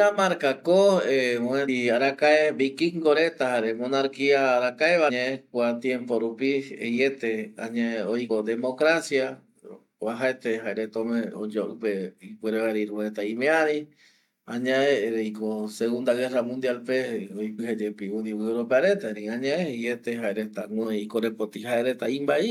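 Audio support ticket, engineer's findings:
Short blips at 1.67, 5.09, 8.29, 17.58 and 20.83 s, each under 20 ms. Looks like damaged data in the compressed stream: corrupted bytes make the decoder misread frames, lose sync and hunt for the next header. Check the source file or transport.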